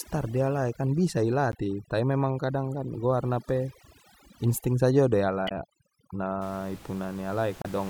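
Overdone noise removal runs from 0.0 to 6.42 s. Heavy denoising strips the room noise, which sits about 21 dB below the speech, along with quiet parts of the voice, leaving near-silence with twinkling specks. Damaged data in a compressed stream appears at 1.52 to 1.55 s, 5.45 to 5.53 s and 7.62 to 7.66 s. Each time, corrupted frames make the decoder lose sync, producing brief chirps or blips.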